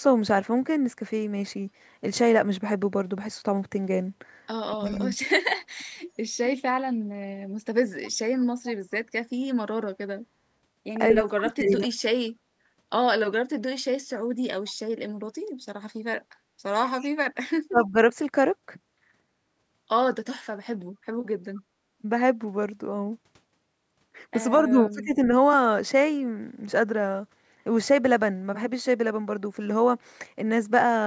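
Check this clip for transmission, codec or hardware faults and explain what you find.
The clip has two faults typical of a hands-free call: brief speech suppression while both sides talk at once, and faint echo leaking back about a quarter second late.

Speech suppressed in double talk occurs at 4.71–6.5 s, 11.22–11.96 s, 17.7–17.96 s and 24.67–25.21 s. The speech dips by around 20 dB, and by around 30 dB at 11.22 s, in short bursts. The likely cause is an echo canceller that could not separate near speech from far-end echo and so attenuated both.

Echo leak appears at 4.86–5.02 s, 8.03–8.75 s and 16.99–17.85 s as a faint copy of the speech trailing by 234 ms. It is roughly 20 to 35 dB below the speech, strongest at 8.03 s. This is likely loudspeaker pickup that the echo canceller left only partly removed.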